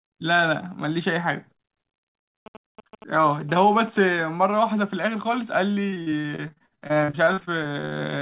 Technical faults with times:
2.46-4.22 GSM signalling bursts
5.90-7.97 repeated packet loss (robotic sound)

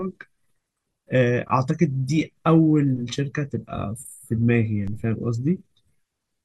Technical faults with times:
4.87 DC step

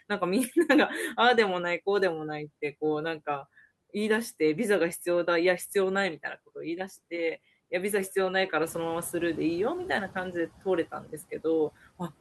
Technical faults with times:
8.62-9.76 noise suppressor catching up
10.92-11.13 speech cut by the noise suppressor

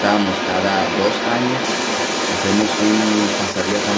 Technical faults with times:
0.00-3.98 other side's voice leaking through

